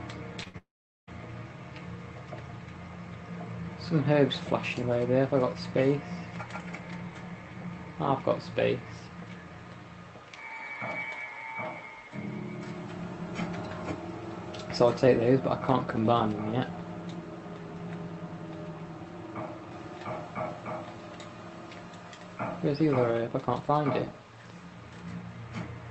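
From 0.43 to 0.48 s, short concealed packet loss leaves about 20 ms patched by extending the preceding sound, a brief smear rather than a gap.

Straight after, from 0.48 to 0.56 s, a burst of packet loss drops about 60 ms. The concealment holds the last sound and fades it, so it is longer and dies away, unlike the first smear.

From 0.58 to 1.09 s, the sound fades and then gives way to roughly 0.4 s of silence before resuming further on, with about half a second missing. This is likely a long network dropout. The true silence sets it apart from the shorter, fully concealed losses.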